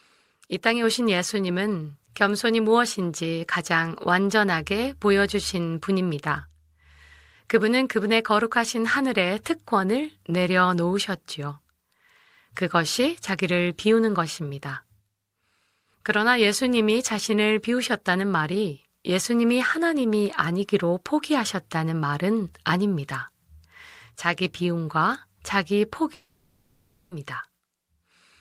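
From 26.14 to 27.12 s the speech cuts out: the last sound smears into a fading buzz, then near-silence, resuming with that stretch missing, likely a long network dropout.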